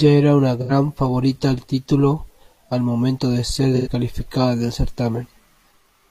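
AAC frame loss with concealment occurs at 0.60–0.71 s and 3.76–3.88 s. Each gap of about 85 ms, consistent with two lost frames, is filled from prior spectra, giving brief smeared, noisy patches.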